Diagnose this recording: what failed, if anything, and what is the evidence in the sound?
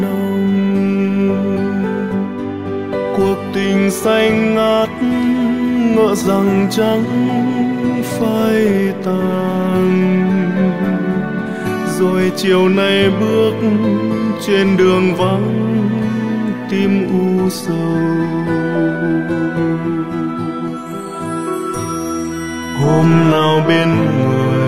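The fault is in the network delivery path: an adaptive stream at a lower bitrate. From 17.59 s to the end, quality drops abruptly with no gap. Nothing remains above 14.9 kHz, and codec artefacts rise, which points to a switch from AAC-LC to a low-rate HE-AAC rendition when throughput fell.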